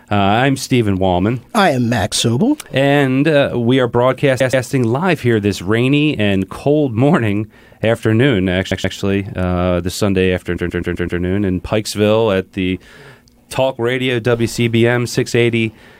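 Repeated frames make the speech stutter at 4.39 to 4.65 s and 8.70 to 8.96 s, where a 128 ms block plays twice more, and at 10.56 to 11.20 s, five times more. Unlike a dropout, nothing is lost: the same slice returns and the clip grows longer.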